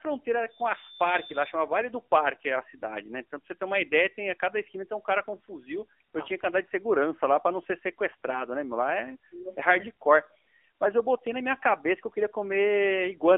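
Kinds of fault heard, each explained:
AMR narrowband mobile codec: the whole clip has been squeezed through the old 2G/3G phone speech codec, so the speech lives in a telephone band of about 300 Hz to 3.4 kHz with nothing on top. The codec rebuilds the voice from a vocal-tract model fed by sparse pulses, and here the damage is plainly audible, with a buzzy, synthetic edge that fits one of the lower modes, around 7.4 kbps.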